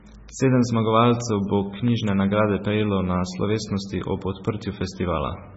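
From start to finish the speech has that watery, swirly quality, with a hard ceiling at 7.7 kHz and nothing above it, so it's likely MP3 compression, and a heavily squeezed one at that, fitting a bitrate of around 16 kbps. With so few bits, the encoder throws away weaker frequency lines and they flicker in and out frame by frame. That's the underwater churn you hear, and the treble cut-off takes the air off the top.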